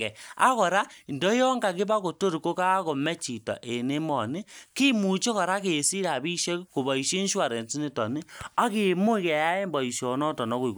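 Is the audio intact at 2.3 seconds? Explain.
Yes, the audio is intact at 2.3 seconds, with no dropout, click, distortion or other fault at that point.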